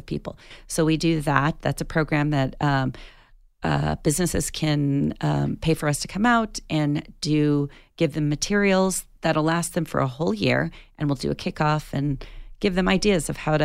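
No technical faults are audible anywhere in this speech.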